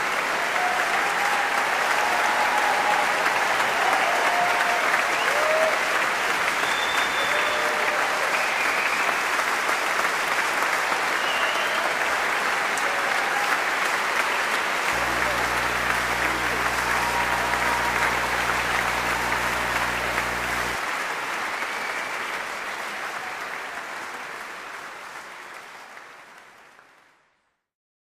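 From 14.92 to 20.76 s a 60 Hz buzz with hash above it sits roughly 15 dB under the audio: video or display buzz from a screen or video cable coupling in.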